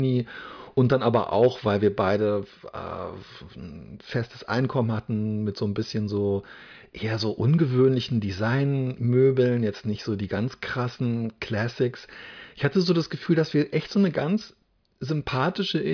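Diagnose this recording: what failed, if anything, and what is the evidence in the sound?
No fault detected.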